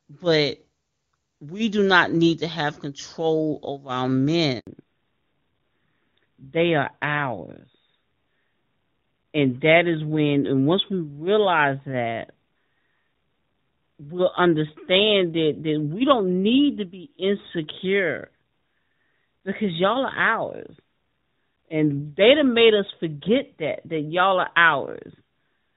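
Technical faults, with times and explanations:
4.59–4.67 s: handover gap. Right after "have control over our", the audio cuts out for 80 ms as the call switches networks and no frames arrive.
4.67 s to end: fallback to narrowband. Earlier HD Voice coding gives way to a narrowband codec, which fits AMR-NB at 12.2 kbit/s. Nothing above 4 kHz remains, so the sound turns duller.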